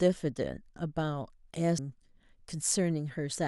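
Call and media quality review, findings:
Compressed frames skipped at 1.78 s and 3.35 s: speech jumps ahead about 200 ms, then about 300 ms. This points to roughly ten 26.1 ms frames dropped or rejected by the decoder.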